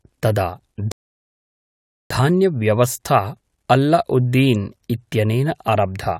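Speech, and there's one clear rebuffering stall in it. At 0.92 s the audio drops to dead silence and stays there until 2.1 s, then picks up exactly where it left off. Nothing's missing from the speech; the player just ran dry on downloaded audio and had to wait for more data before carrying on. So the content is intact, but the stall adds about 1.19 s of dead air to the timeline.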